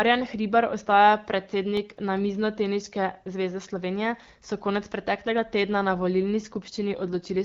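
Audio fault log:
1.57–2.37 s, CD scratch ticks: five brief clicks of up to about a millisecond, as a disc blemish defeats error correction every revolution and samples get concealed.
6.41–7.44 s, AMR rate drop: after "preteklega tedna na volilni" the speech roughens and turns synthetic, as the link forces AMR-WB down from 12.65 to 8.85 kbit/s.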